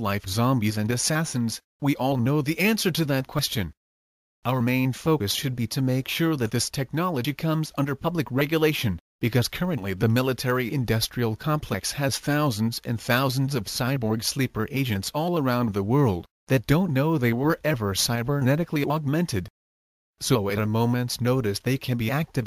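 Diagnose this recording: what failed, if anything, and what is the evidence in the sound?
Jumps at 3.39, 5.20 and 7.25 s skip ahead around 50 ms without silence. The likely cause is a dropped buffer (overrun) in the driver, where hardware overwrote unread samples.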